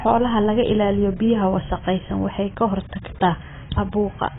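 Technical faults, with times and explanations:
Throughout: AAC compression. The speech sounds dull and band-limited, with nothing above 3.7 kHz, and its sibilants and held vowels carry a heavy warbling, smeared texture. The likely cause is low-bitrate AAC-LC coding, which fits a rate around 16 kbps. The encoder drops its cut-off and starves bands of bits. A spectrogram shows a flat horizontal ceiling at 3.7 kHz, with patchy holes and blocky, frame-by-frame gaps beneath it.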